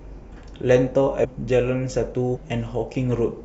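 It's a speech clip with compressed frames skipped in two places. At 1.23 to 1.25 s the audio lurches forward by roughly half a second, and at 2.35 to 2.37 s it jumps again by about a fifth of a second. Whole blocks of coded audio never got played, either missing from the file or thrown out by the decoder as corrupt.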